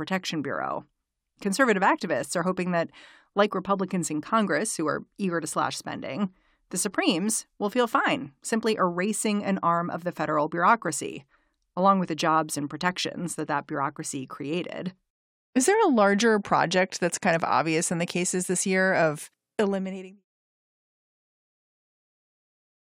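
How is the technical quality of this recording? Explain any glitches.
No technical faults are audible.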